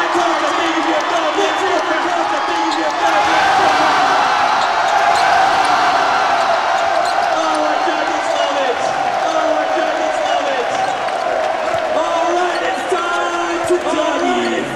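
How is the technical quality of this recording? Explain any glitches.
The recording carries a doubled audio track from start to finish. A second, out-of-step copy of the signal, likely from a duplicate capture path or a misaligned edit, is mixed in. It trails about two seconds behind at roughly equal loudness, full-band and dry, so every sound repeats as a distinct echo.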